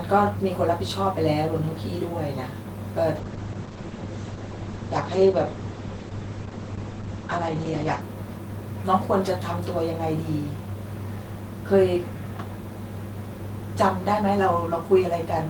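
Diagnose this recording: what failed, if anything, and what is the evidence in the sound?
A call bitrate drop at the codec stage from 3.17 to 8.09 s muffles and roughens the speech. The spectrogram loses everything above 8 kHz, which fits the encoder falling to about 10 kbps.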